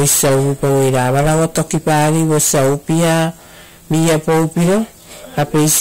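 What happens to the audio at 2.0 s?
At 2.0 s the speech carries a harsh fuzz on every loud sound. This is hard clipping throughout the clip: driven about 19 dB too hot, nearly a third of its samples are sheared flat.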